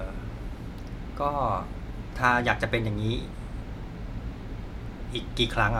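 No technical faults are audible.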